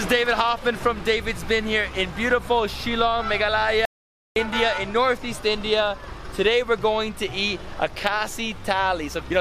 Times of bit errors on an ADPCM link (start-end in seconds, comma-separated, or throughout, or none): none